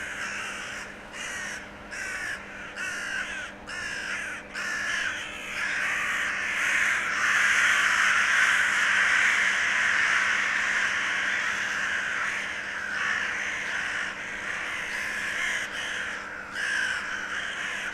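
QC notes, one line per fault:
5.61 s, 15.65 s, 17.55 s: compressed frames skipped. Runs of compressed frames were lost or rejected by the decoder, so the audio jumps ahead by roughly 100 ms, 150 ms and 70 ms, which fits whole 20 ms frames.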